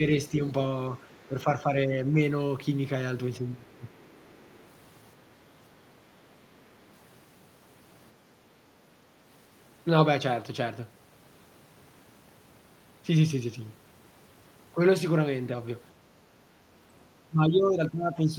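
From 1.27 to 2.15 s the talker's level sags by a few decibels in patches totalling about half a second. This is speech suppressed in double talk, likely caused by the echo canceller failing to separate the near talker from loudspeaker echo while both sides spoke, so it pulled both down. It recurs from 3.4 to 3.9 s, and again from 17.28 s to the end, each time much deeper, roughly 15 dB. Unlike gating, the dips follow the talker's own words and thin the voice itself, not just the room.

Between 4.14 and 4.46 s a faint second voice sits far below the talker, around 35 dB down. This is the other side's voice leaking through, likely from far-end audio on the loudspeaker that the echo canceller did not fully remove from the microphone. It differs from the suppression faults because something is added rather than taken away: a brief, distant scrap of a different voice.

At 16.07 to 16.22 s the room sound drops by about 7 dB for roughly 150 ms, then returns. 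This is background gated by the echo canceller, which clamped the microphone hard while the loudspeaker played. The tell is that the ambience, not the talker's voice, momentarily dips.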